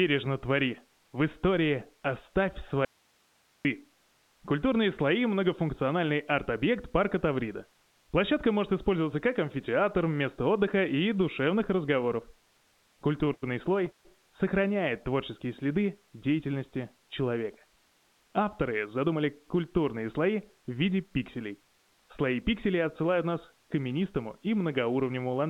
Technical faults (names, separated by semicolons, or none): audio dropout to a faint residue; repeated stalls (stutter); jitter buffer speed-up